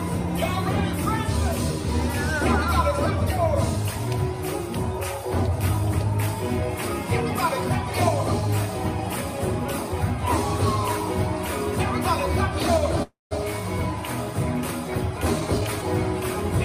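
Call audio freeze, 13.03 to 13.33 s: the last sound stretches into a fading buzz or hiss, then silence, likely from delayed packets draining the jitter buffer, before resuming with nothing lost.

Jitter buffer speed-up, 15.40 to 15.83 s: repeated pitch-period cuts shave off about 150 ms, so the audio runs at 135% speed, hurried but unchanged in pitch.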